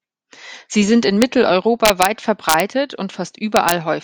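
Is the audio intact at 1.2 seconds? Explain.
No. At 1.22 s, just after "sind in", there is an integer overflow. A loud peak in the speech pushed a sample past the largest value the integer format can hold. Instead of being held at that limit, the value wrapped around to the opposite extreme. The waveform jumps across its full range in an instant. It is heard as a single violent crack, much harsher than ordinary clipping.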